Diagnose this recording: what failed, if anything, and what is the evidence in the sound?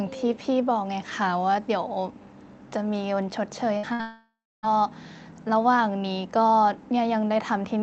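Two bursts of packet loss hit the network stage, at 3.77 to 3.85 s and 3.93 to 4.01 s. Each removes about 60 ms of speech. The receiver's concealment stretches the last received sound over the gap, so each burst becomes a brief held buzz or fading hiss, and the speech then resumes with a small skip. On a spectrogram, each gap shows frozen, smeared energy fading out, then an abrupt jump. The waveform shows a decaying, overly regular stretch.

Straight after the second burst, from 4.01 to 4.65 s, about 0.62 s of audio is lost, likely to a long network dropout. Concealment first continues the last sound as a fading buzz or hiss. About 0.31 s of that span is then silence before speech returns without the missing part. On a spectrogram, a smeared, dimming streak gives way to an empty band, all within the roughly 8 kHz ceiling of the call codec. The waveform tapers to a flat line.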